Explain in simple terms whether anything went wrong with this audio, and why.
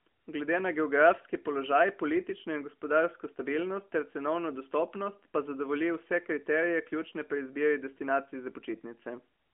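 Nothing went wrong here: listening through the whole recording, nothing stood out as a problem.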